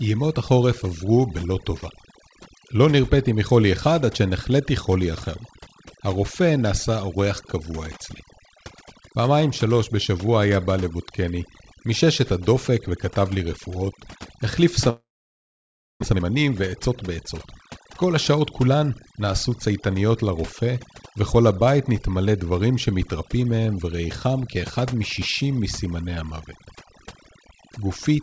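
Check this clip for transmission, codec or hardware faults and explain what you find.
Three faults are audible, carried over a G.722 call path that leaves nothing above 8 kHz.

Overdone noise removal runs throughout. Aggressive spectral gating strips quiet bands, leaving twinkling specks, seen as a near-black spectrogram background dotted with isolated bins.

From 14.90 to 16.04 s, there is a long gap, likely a long network dropout. About 0.6 s of audio is lost. The waveform shows a short fading concealment tail, then flat silence, then the audio resumes.

From 16.12 to 19.95 s, jitter buffer speed-up trims pitch-period slices to shed roughly half a second of backlog. The speech runs about 13% fast at unchanged pitch, with compressed syllable spacing.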